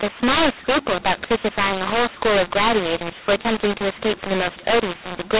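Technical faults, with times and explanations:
Throughout, mu-law and A-law mixed up: the telephone speech was coded as mu-law G.711 but decoded as A-law, so each 8-bit code is mapped to the wrong point on the logarithmic scale. Some levels come out too loud and others too quiet, which makes the speech harsh and distorted. The quietest codes are raised well above silence, so pauses fill with noise. The 4 kHz telephone band of the 8,000-sample coding can still be heard.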